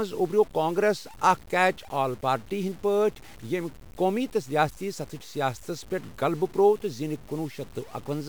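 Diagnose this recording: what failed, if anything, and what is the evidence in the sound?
The likely failure is in sample-format conversion: the speech was cut down to about 7 bits by truncation, with no dither added. That leaves the quantisation error locked to the signal, so it sounds like grainy, gritty distortion riding on the speech for the whole clip, roughly 25 dB below it. It thickens as the level falls, and the quietest passages break into sputter or drop out between steps instead of fading smoothly.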